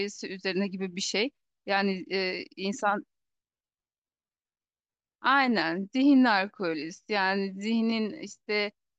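From 3.46 s to 8.60 s, a time-stretched section slows the speech to 0.72x with unchanged pitch, likely by repeating short slices. It drags, and spectrogram features stretch horizontally.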